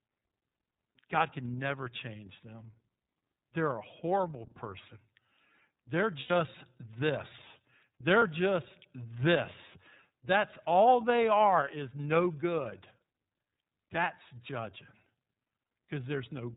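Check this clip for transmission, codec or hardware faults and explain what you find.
Two problems here: the whole clip runs through the iLBC codec, and there are two short dropouts where iLBC frames went missing.

iLBC codec, throughout: The bandwidth is narrowband, so nothing above 4 kHz gets through, and the damage is plainly audible. The speech comes out clear but a bit rough and synthetic, because iLBC models the excitation of each 30 ms frame on its own rather than carrying anything over from the previous one. That harshness, along with the frame length, fits its 13.33 kbps mode.

Lost iLBC frames, 6.2 to 6.31 s and 8.19 to 8.22 s: At each of these points the speech briefly turns into a held, slightly buzzy or breathy vowel. The decoder is filling the hole by repeating the last pitch cycle with some noise mixed in. The first gap lasts about 90 ms, which suggests three lost 30 ms frames. 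The second sounds like a single frame. Because every iLBC frame decodes independently, the speech snaps straight back to normal once real frames arrive again.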